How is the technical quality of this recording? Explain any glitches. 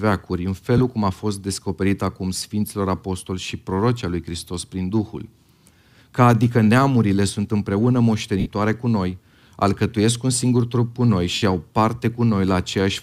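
The recording has three short dropouts where the sound briefly turns into a hissy, washed-out smear before recovering. These are lost LE Audio frames, at 0.78 to 0.80 s (about 22.5 ms), 8.40 to 8.46 s (60 ms) and 11.34 to 11.42 s (75 ms), consistent with runs of 7.5 ms frames going missing. For each gap, the LC3 decoder repeated the last good spectrum with scrambled phase, so pitched speech loses its tone and becomes noise-like. In the two longer gaps, the fill audibly fades toward silence.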